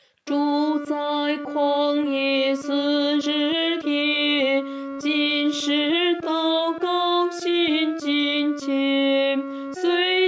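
No technical faults are audible.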